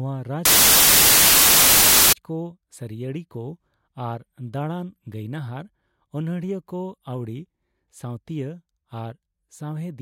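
Samples built from the wrong bytes, from 0.45 to 2.13 s: the reader misassembles each sample's bytes, so the rapidly varying low bits land in the most significant positions. The speech turns into loud, harsh noise close to white.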